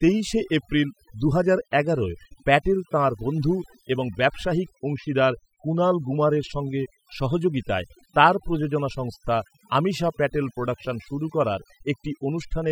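From start to finish the speech carries overdone noise removal: a noise reduction stage was pushed too hard on a noisy recording, so individual frequency bands sitting near its noise estimate are pulled far down or cut entirely, and the softer parts of the voice are removed with them. The background drops and breaks up into twinkling specks. Unlike a noise gate, which opens and closes the whole signal at once, the damage here is spread across separate frequency bands, so the specks glint independently even while speech continues.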